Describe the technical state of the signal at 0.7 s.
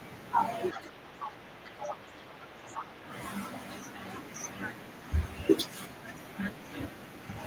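At 0.73 to 0.79 s the other side's voice leaks through: a brief second voice, roughly 10 dB below the speech, likely left behind when the echo canceller failed to remove loudspeaker sound from the microphone. On a spectrogram it appears as a faint, separate harmonic pattern overlapping the main one.

From 0.73 to 3.1 s the speech is suppressed in double talk. The voice dips by up to roughly 10 dB over about two seconds in total, likely because the canceller turned everything down while both sides spoke. On the waveform the envelope sags.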